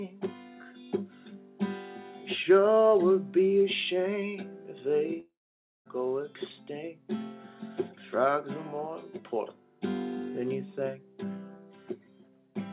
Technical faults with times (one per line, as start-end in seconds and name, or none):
5.20-5.87 long network dropout